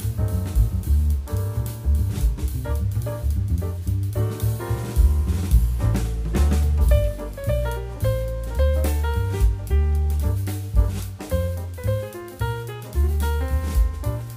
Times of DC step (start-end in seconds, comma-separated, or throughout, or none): none